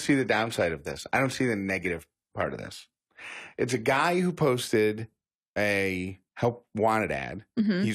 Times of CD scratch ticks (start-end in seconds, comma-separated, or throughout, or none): 1.56-2.10